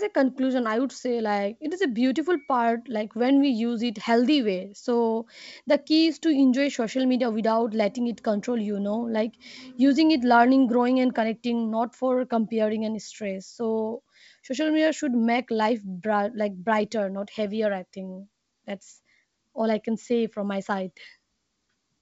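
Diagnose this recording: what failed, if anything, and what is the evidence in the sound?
Nothing seems to have failed here: the speech sounds like ordinary G.722 wideband telephone audio at 64 kbit/s, with at most a faint trace of the codec in the sound.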